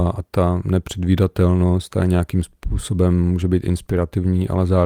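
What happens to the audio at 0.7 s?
Nothing goes wrong at 0.7 s; the speech plays through that moment intact, with no dropout, click or distortion.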